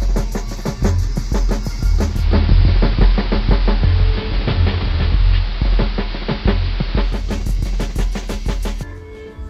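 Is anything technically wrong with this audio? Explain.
Yes. From 2.03 s to 7.32 s, the music shows digital radio blending to analogue. The receiver lost its digital signal and cross-faded to the station's AM broadcast, then returned. Each blend takes about a third of a second. On the AM side, the treble goes dull. The level shifts by about 4 dB. Hiss rises to roughly 20 dB below the music.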